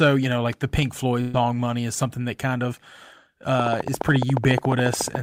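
At 1.21 s the speech stops moving forward and the last sound is held and faded for about 120 ms, a buzz or hiss that thins out before the talker resumes at 1.36 s with roughly 120 ms of speech simply gone. This is a burst of packet loss: consecutive packets never arrived in time, so the receiver stretched and attenuated what it had instead of leaving silence, then skipped ahead when fresh audio came in.

From 3.60 s to the end of the clip a steady ticking runs over the speech and through its pauses, about 14 clicks per second at an even spacing, each pop standing well above the speech level. This train of clicks is a string of near-identical pulses added on top of the signal. The regular rate points to a periodic source, likely electrical interference from nearby equipment or a faulty connection or power supply.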